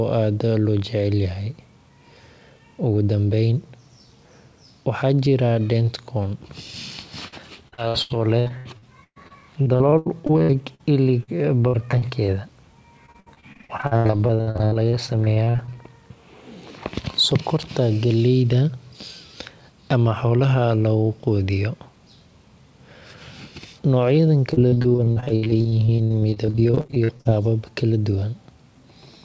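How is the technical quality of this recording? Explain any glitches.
The quality is poor in places: the call dropped audio repeatedly. The speech is band-limited, with nothing above 8 kHz, which fits a wideband call codec such as G.722.

Repeated packet loss (robotic sound) occurs at 7.28–10.81 s, 11.67–12.30 s, 13.06–15.84 s and 24.53–27.30 s. Packets kept failing to arrive, so gaps up to 120 ms were patched by extending earlier sound. Up to about a third of each stretch is filled this way, making the speech choppy and robotic.

Short concealed packet loss occurs at 11.23–11.29 s. About 40 ms of audio never arrived in time, and the receiver filled it by continuing the preceding sound, leaving a brief smear.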